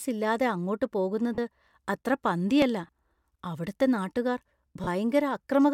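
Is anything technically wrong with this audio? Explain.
Yes. The speech has two kinds of fault.

Lost LE Audio frames occur at 1.35 to 1.38 s, 2.87 to 2.89 s and 4.84 to 4.88 s, lasting about 30 ms, 20 ms and 30 ms. That fits runs of 10 ms frames going missing over the Bluetooth link. For each gap, the LC3 decoder fills in by repeating the last good spectrum with randomised phase signs. The tonal detail of the voice briefly turns into a short, noisy smear before clean audio resumes.

A dropped buffer (overrun) is heard at 2.62 s as a small jump in the sound, with no silence in between. The likely cause is that the capture software didn't read its samples in time and the hardware overwrote them. A very short piece of roughly a millisecond or two was discarded, and the audio on either side was spliced directly together, leaving that abrupt discontinuity.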